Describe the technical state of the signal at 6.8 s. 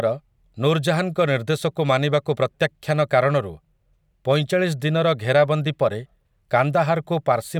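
At 6.8 s the speech signal is intact, with no dropout, distortion, noise burst or other fault audible at that moment.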